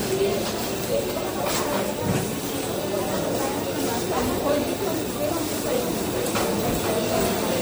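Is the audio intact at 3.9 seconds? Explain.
No. At 3.9 seconds, as throughout, the sound is watery and swirly with dulled treble and smeared attacks, likely MP3 compression at a low bitrate, consistent with 64 kbps, where weak frequency lines drop in and out.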